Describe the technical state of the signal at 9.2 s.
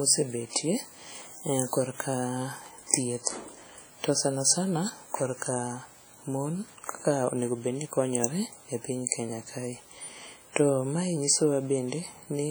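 At 9.2 s you're hearing the same thing that runs through the whole speech clip: heavy transform-codec damage, most likely WMA compression. The encoder smears its quantisation noise over long blocks, so each sound rings and goes washy, with a hiss that swells and fades along with the signal. Quieter detail has been thrown away outright, and that degree of damage fits a low bitrate of around 32 kbps.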